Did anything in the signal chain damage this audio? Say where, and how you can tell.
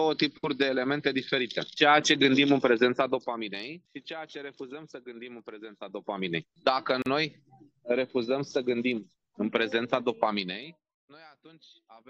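Yes. Zipper noise sits in the gain stage, likely at the driver or buffer level. Ticking rides on three level moves: 2.90 to 3.72 s, down about 15 dB; 5.71 to 6.36 s, up about 15 dB; 10.33 to 10.95 s, down about 25 dB. The steps come about 40 times a second. The gain is updated once per buffer with no smoothing, so each jump clicks.

There is a gap at a join of encoded pieces, at the codec stage. From 7.02 to 7.06 s, a silence of about 40 ms cuts into continuous sound. Its edges are smeared. The sound then resumes where it stopped. Separately encoded pieces were joined with their start delay and end padding left in.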